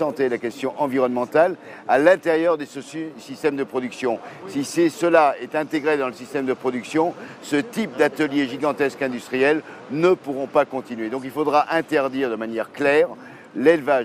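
Nothing in this audio stands out as a technical problem at any point, so there's nothing to flag here.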